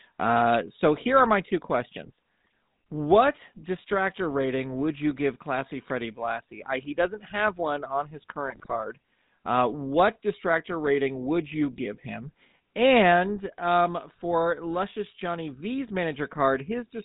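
Speech coded throughout with the GSM full-rate codec, and the damage is plainly audible: the voice has the buzzy, gravelly roughness of a coder that rebuilds speech from a vocal-tract filter excited by a sparse, regular pulse train, and the sound fits the old 13 kbps full-rate mode. On a spectrogram everything stops at a hard ceiling near 4 kHz, and the harmonics look smeared and grainy instead of cleanly striated. Two bursts of GSM bit errors break through, where corrupted filter, pitch or gain values reached the decoder. The first, right after "are my two questions", is brief, at 2.46 s. The second, after "have one on his", runs from 8.47 to 8.75 s as squawking, gargling distortion, with sudden level jumps and bent, blotchy spectral bands across those frames.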